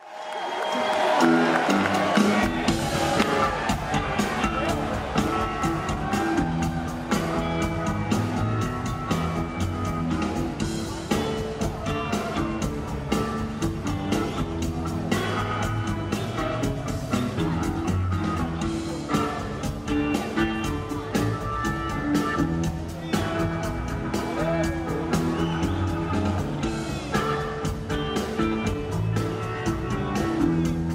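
A repeated buffer at 2.83 s clicks in the audio: a 1.3 ms slice, fitting a 64-sample buffer, plays twice more because new data arrived late.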